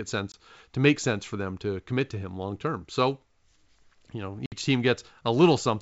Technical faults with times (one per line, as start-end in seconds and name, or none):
0.32-0.35 packet loss on an ADPCM call
4.46-4.52 packet loss on an ADPCM call